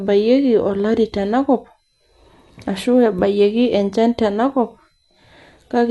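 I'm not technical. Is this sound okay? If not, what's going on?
No, not quite. All the way through, the speech sounds dull and a bit muffled, with a rough, fluttery hiss clinging to it. Nothing comes through above 11.5 kHz, which is where the crisp, airy detail usually lives. That's most likely Dolby Digital compression squeezed too hard: to save space, the encoder drops the top end and skimps on detail, and the player fills the gaps with a little noise.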